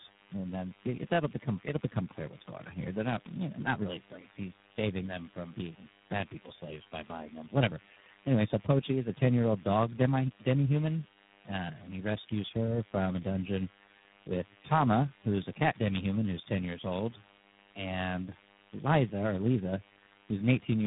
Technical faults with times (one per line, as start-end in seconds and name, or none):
0.00-20.87 DECT cordless phone buzz
0.00-20.87 tandem speech coding